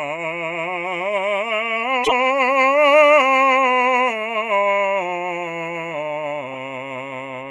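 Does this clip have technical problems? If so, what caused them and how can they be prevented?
Yes. Corrupt frame decoded at 2.02–2.12 s and 6.50–6.57 s: damaged bits in a few compressed frames of the music were decoded anyway, throwing energy into wrong frequencies as a brief burst, the first near full scale, the second much quieter. Checksum-based error detection with concealment or retransmission prevents it.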